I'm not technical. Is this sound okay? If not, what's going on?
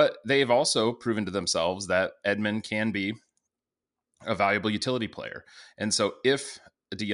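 Yes, I can't hear anything wrong in this recording.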